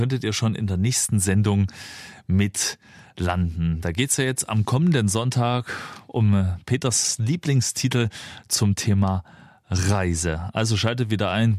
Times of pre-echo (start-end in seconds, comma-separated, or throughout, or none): none